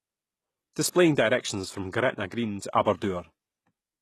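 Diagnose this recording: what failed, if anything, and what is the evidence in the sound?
Codec stage, throughout: treble stops at 12.4 kHz yet sounds bright but synthetic, with gritty s sounds. That copied-band brightness, unlike dull low-pass loss, points to likely HE-AAC compression near 16 kbps.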